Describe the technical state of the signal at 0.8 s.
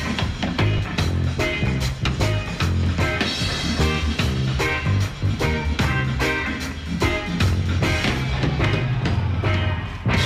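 At 0.78 s, Bluetooth lost LE Audio frames, a dropout that points to a single 10 ms frame. The LC3 decoder filled the gap by replaying the previous spectrum with randomised signs, so any tonal content briefly smears into a short burst of noisy texture.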